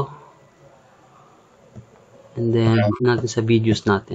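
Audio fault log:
2.72–3.06 s, compressed frames skipped: within this stretch the audio jumps forward, losing roughly 50 ms, because whole coded frames never reach the output, either absent from the file or rejected by the decoder as damaged. Unlike a dropout, there is no silent hole, just a sudden skip ahead in the sound.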